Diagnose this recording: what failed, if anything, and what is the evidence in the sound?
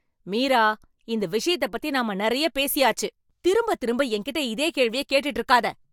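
Listening to the speech here, nothing stood out as a failure at any stage of the chain.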